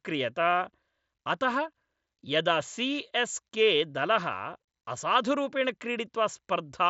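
No technical faults occur in this speech at any point.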